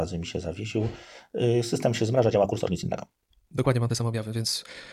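Right after "system się", at 2.11 s, the pace jumps and stays that way to the end: a time-stretched section running about 1.57 times faster with the pitch unchanged. It sounds rushed, likely from software squeezing the audio by dropping short pieces.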